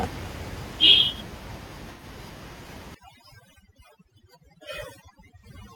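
AAC frame loss with concealment first appears at 1.93 to 2.04 s. About 85 ms of audio goes missing, which fits two lost frames. The decoder patches the gap from the last good spectrum with scrambled phase, so it sounds like a brief smeared, noisy, phasey blur.

Overdone noise removal runs from 2.95 s to the end of the speech. The room noise sits about 13 dB below the voice. The suppressor pulls any band near its noise estimate far down, so the background drops and breaks up into twinkling specks.

A second AAC frame loss with concealment occurs at 5.39 to 5.45 s. This gap is about 43 ms long, consistent with a single lost frame. It is filled by the same spectral guesswork and heard as another short smeared, phasey patch inside the over-processed stretch.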